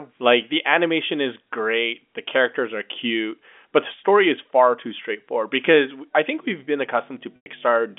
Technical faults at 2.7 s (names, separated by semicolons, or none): none